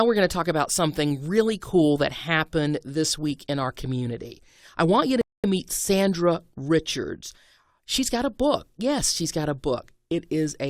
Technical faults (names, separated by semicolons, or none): rebuffering stall